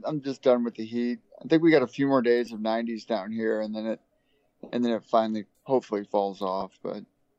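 Lost LE Audio frames appear at 2.46 s and again from 6.61 to 6.63 s, each a gap of about 10 ms, which fits one missing LC3 frame. The decoder fills each gap by replaying the previous spectrum with randomised signs, leaving a short, grainy smear in place of the lost audio. The light lossy compression shows at most a faint watery texture on noise and attacks.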